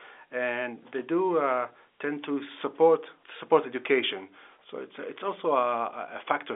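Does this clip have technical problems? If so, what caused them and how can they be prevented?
No, there are no technical problems to point to in this speech clip. It has passed through G.711 telephone coding, so the sound is held to the narrow telephone band of roughly 300 Hz to 3.5 kHz, as expected for a fixed-line call.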